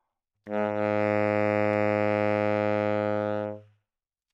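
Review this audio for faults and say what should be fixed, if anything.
No faults; nothing needs fixing.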